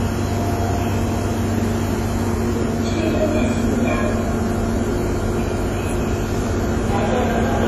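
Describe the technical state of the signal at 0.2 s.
At 0.2 s the sound carries heavy damage that runs through the whole clip and is most likely WMA compression. Nothing is present above about 13.2 kHz, and the remaining band has a ringing, washy quality with hiss that rises and falls with the signal. Long transform blocks smear quantisation noise over tens of milliseconds, and weak spectral lines are discarded outright, which points to a low bitrate around 32 kbps.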